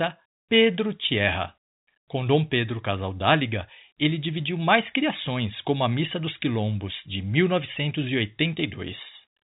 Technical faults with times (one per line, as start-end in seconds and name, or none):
none